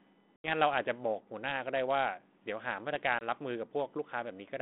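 At 0.36 to 0.51 s and 3.19 to 3.23 s, packet loss on an ADPCM call cuts hard-edged silent gaps into the speech, showing as a flat waveform and a blank vertical band on the spectrogram. The decoder's predictor is then out of step with the sender's, so the speech returns slightly distorted before settling.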